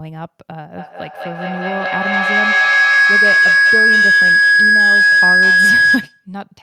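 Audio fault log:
0.77 to 6.28 s, feedback howl: from 0.77 s a tone near 1.5 kHz builds and keeps climbing until it peaks about 12 dB above the speech, with the loop repeating roughly every 200 ms, and it holds until 6.28 s. The round trip from loudspeaker back into microphone adds gain each pass, so the loop's preferred frequency grows rather than dying away. An echo would instead fade with each repeat and keep the full sound rather than collapsing onto one pitch.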